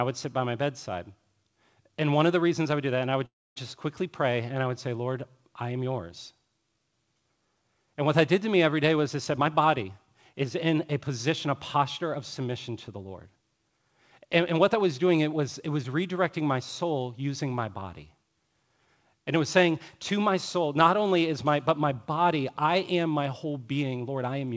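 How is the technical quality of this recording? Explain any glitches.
Two glitches stand out in this speech, and the whole thing has that call-codec band limit, nothing above 8 kHz, which fits G.722.

From 3.26 to 3.58 s there's a call audio freeze: a brief fading fill, then about 260 ms of silence, likely packets stalling and the jitter buffer running dry.

From 9.38 to 12.97 s a jitter buffer speed-up trims tiny pitch-period chunks, roughly a third of a second total, so speech runs 108% fast at unchanged pitch.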